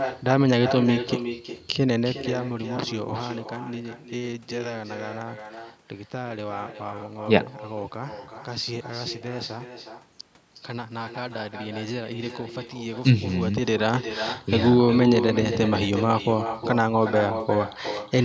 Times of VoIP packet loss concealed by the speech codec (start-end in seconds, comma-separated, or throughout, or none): none